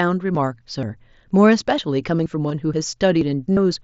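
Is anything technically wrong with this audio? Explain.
Yes, there are two kinds of fault.

Audio missing between chunks occurs at 0.35, 0.83, 1.31, 1.78, 2.26, 2.74 and 3.21 s. Roughly every half second, a slice of about 20 ms vanishes and the edges butt together, likely from chunked processing. Each appears as a thin vertical seam on a spectrogram and a waveform discontinuity.

Concealed Bluetooth headset packet loss occurs at 2.49 s (15 ms) and from 3.53 to 3.57 s (45 ms). Lost packets were filled by repeating recent waveform. The longer run sounds like a held buzzy tone, visible as flat repeated harmonics.

The mSBC headset codec limits the band to about 8 kHz.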